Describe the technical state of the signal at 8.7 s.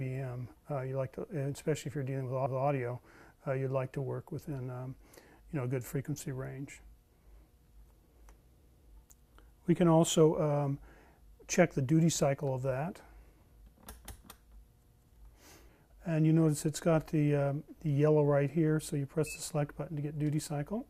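At 8.7 s you're right in the middle of an overlapping chunks fault, running from about 8.66 to 8.86 s. The audio seems to be handled in 6-second chunks, and the next chunk starts 200 ms before the previous one finished, so that last 200 ms of sound plays a second time at the join. You hear it as a short stutter, a little jump back with a click where the repeated piece begins.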